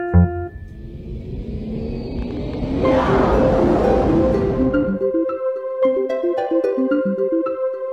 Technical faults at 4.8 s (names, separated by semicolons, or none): time-stretched section